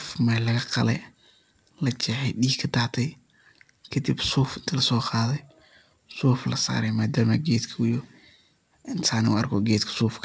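No faults heard in the speech; it carries a call codec's band limit with nothing above 8 kHz, which fits G.722 wideband at 64 kbps.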